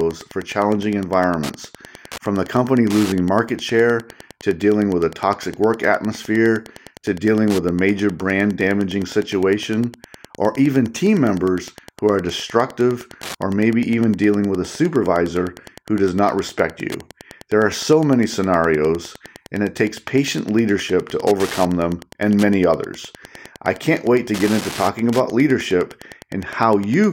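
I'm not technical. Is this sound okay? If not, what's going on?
No. A Wi-Fi radio sitting close to the recording gear is leaking its signal into the audio circuit, which is Wi-Fi interference. Its regular beacon, every 102.4 ms, becomes a steady ticking about ten times a second, quieter than the speech but present throughout.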